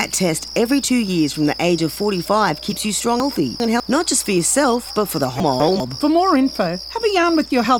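From 3.2 to 3.8 s, and again from 5.4 to 5.8 s, the sound jumbles briefly. These are chunks out of order. In the first case a 200 ms block arrives two blocks late and plays after the material that should follow it. In the second it is one block late. Each swap leaves three hard joins. Unlike a dropout or a repeat, nothing is missing or duplicated. The same material simply plays in the wrong order.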